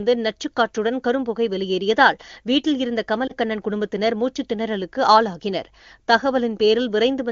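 At 3.27 to 3.32 s, lost AMR speech frames cause a brief dip, consistent with one 20 ms frame rebuilt from reused, attenuated decoder parameters.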